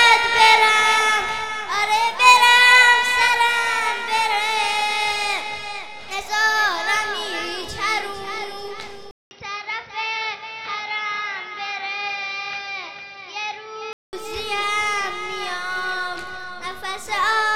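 At 9.11 s a gap of about 200 ms opens, and from there until 14.13 s the sound turns dull and boxy, a few decibels quieter, over a new faint background noise well below the signal. This is most likely an input switched to a poorer device. On a spectrogram everything above 6 kHz is missing for that stretch. The waveform shows a flat gap at the switch, then a slightly smaller envelope until full bandwidth returns.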